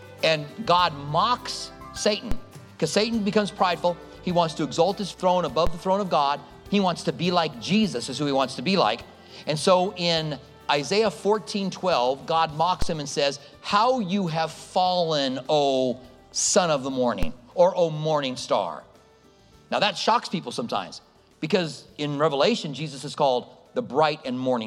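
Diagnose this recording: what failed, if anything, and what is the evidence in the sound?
A DC step at the converter or analogue input: the waveform's zero line jumps at 2.32, 5.67, 12.82 and 17.23 s, by about -14 dBFS for the first two and about -12 dBFS for the last two. Each jump is heard as a low thump, then bleeds away through a 5 Hz high-pass. Unlike a dropout or digital click, the sound itself continues uninterrupted.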